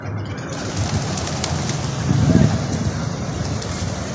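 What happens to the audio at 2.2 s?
Nothing goes wrong at 2.2 s; the sound carries on intact there, with only the normal band limit of call microphone processing, nothing above 8 kHz.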